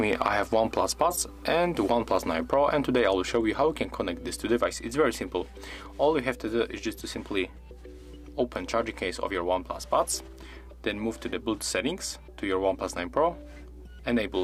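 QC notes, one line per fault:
Throughout, mains hum: a steady 60 Hz tone with low harmonics sits about 20 dB under the sound. Power-line coupling, such as a ground loop, leaks in.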